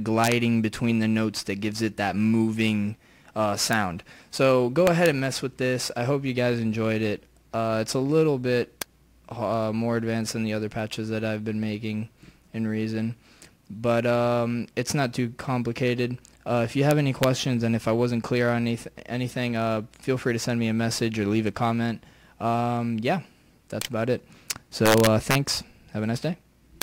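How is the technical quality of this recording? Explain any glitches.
The recording is marred by repeated integer overflow, heard as harsh cracks at 0.24–0.32 s, 3.73 s, 4.87–5.06 s, 8.82 s, 16.91–17.24 s, 23.82 s, 24.51–25.35 s and 26.82 s. On loud peaks the signal pushes from about 0 dB to about 4 dB past the largest representable value. Instead of being held at full scale, each such sample wraps to the opposite extreme. Those full-range jumps make violent, splintering cracks, far sharper than ordinary clipping. They are brief snaps at the single instants and rough bursts of crackle across the longer spans.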